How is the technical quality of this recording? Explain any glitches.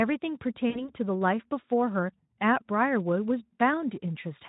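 One glitch stands out, from 0.70 to 0.90 s: VoIP packet loss concealed by the speech codec. About 60 ms of audio went missing, and the decoder filled it by extending the last pitch and spectral shape while lowering the level, so the speech smears into a buzzy tone or coloured noise that fades. Unlike a plain dropout, there's no silent hole. The voice also stays weak or distorted after the stream resumes, because each rebuilt frame feeds the next. Light Speex coding colour runs throughout.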